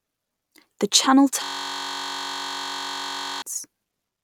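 From 1.44 s to 3.42 s a system hang loop occurs: the driver stops feeding new audio while the hardware keeps replaying one 21.33 ms slice of its ring buffer, which fits a 1024-sample buffer. The speech gives way to a steady 46.9 Hz buzz.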